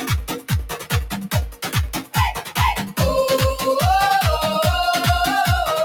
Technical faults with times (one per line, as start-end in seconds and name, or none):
0.00-5.84 noise suppressor applied to music or sounds
0.27-0.93 sound cut by the noise suppressor
1.52-2.99 sound cut by the noise suppressor